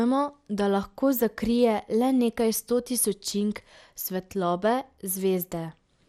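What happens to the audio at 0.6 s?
At 0.6 s the speech sounds dull and gurgling, with granular distortion and nothing above 16.7 kHz, as throughout the clip. This is likely MP2 compression starving sub-bands of bits, consistent with about 80 kbps.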